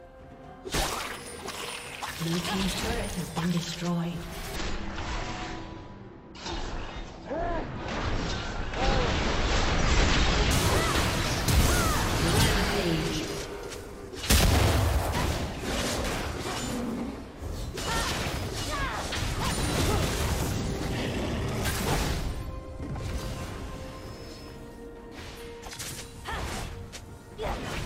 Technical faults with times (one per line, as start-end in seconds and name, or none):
4.56-10.51 stereo read as mono